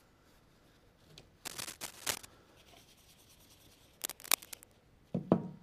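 Cable scratch noise appears from 1.45 to 2.25 s and again from 4.01 to 4.76 s. Dense, uneven rustling bursts sit about level with the sound, then louder. A worn cable or connector being moved is the likely cause.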